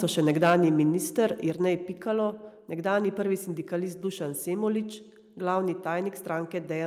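Microphone overload from 0.29 to 0.56 s: the input is driven about 6 dB past the converter's limit, flattening roughly one sample in twenty and adding harsh crackle, likely from excessive input gain. Microphone volume stepped down at 0.5 s by about 2 dB, then at 1.5 s by about 4 dB. Voice and background drop abruptly, likely the call software lowering input gain after clipping.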